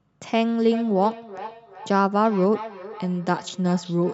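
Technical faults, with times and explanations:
0.59–4.14 s, feedback echo between two devices: the speech returns as distinct copies about every 0.4 s, up to about 14 dB below it, each thinner and more ringing. A nearby device replays the call and this microphone recaptures it, beyond its echo canceller's reach. Room reverberation would smear the sound rather than repeat it.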